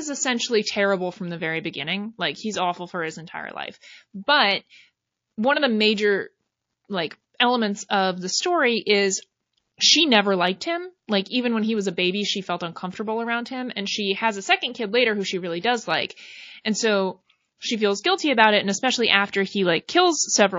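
MP3 compression runs through the whole speech clip, with plainly audible watery, swirly treble and smeared attacks that likely come from a low bitrate near 32 kbps. Pre-echo appears at 15.61 to 15.64 s, just after "later who she really", and again at 16.61 to 16.65 s. Hiss rises about 13 dB and about 12 dB ahead of the attacks because the noise is spread across long blocks that were never switched to short ones.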